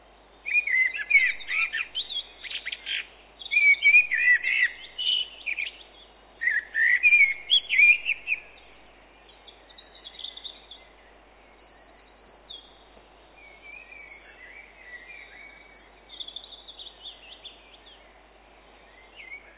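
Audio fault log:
Nothing to log here, just everyday sound coming over a call line whose content stops at about 4 kHz, which is what you'd expect from G.711 mu-law at 64 kbps.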